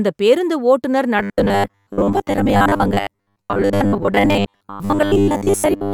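From 1.19 s onward, audio likely arrived too seldom and the last few milliseconds were replayed, producing robotic sound from repeated short buffers: a rigid, metallic 100 Hz buzz.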